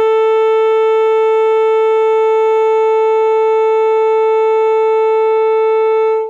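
A short music clip with no technical faults to report. Nothing heard in it points to a problem anywhere in the recording or playback chain.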